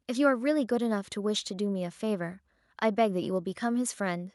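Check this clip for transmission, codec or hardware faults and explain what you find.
No faults detected in transmission.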